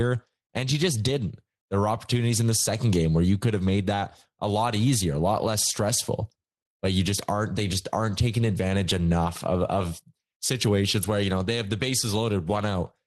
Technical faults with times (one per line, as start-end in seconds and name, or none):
none